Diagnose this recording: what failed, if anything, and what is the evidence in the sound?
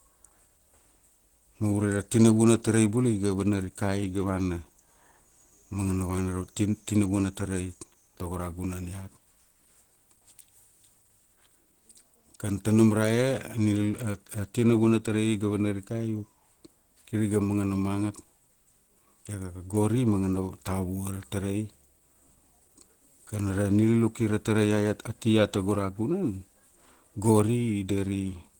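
Codec stage, likely Opus compression: the speech sounds hoarse and grainy throughout, fitting hybrid mode near 16 kbps. The spectrogram shows noise-filled bands up to 20.1 kHz with few holes.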